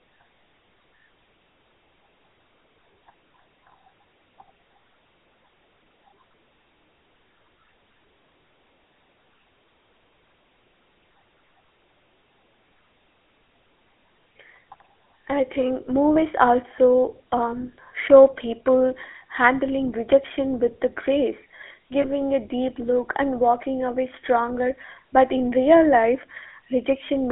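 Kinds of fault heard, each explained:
GSM full-rate codec: The speech passes through a coder that models the vocal tract and excites it with sparse, regularly spaced pulses, which fits 13 kbps full-rate coding. It gives a plainly audible buzzy, gravelly roughness throughout, within a line band of roughly 300 Hz to 3.5 kHz.
Lost GSM frames: Twice, one 20 ms frame drops out and the decoder fills the gap by repeating the previous frame's settings. This gives a brief rough, metallic ring at 16.14–16.17 s after "I think" and at 22.02–22.05 s after "rejection with the grace".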